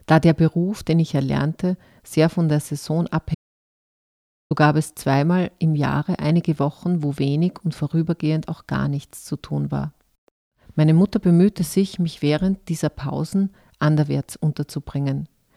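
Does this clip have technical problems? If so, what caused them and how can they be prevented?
Yes. An audio dropout to silence cuts the speech from 3.35 s to 4.51 s, replacing 1.16 s with silence and no room tone. It appears as a flat waveform line and an empty spectrogram band. The input was likely lost briefly while recording continued. Secure connections and monitor input during capture to prevent it.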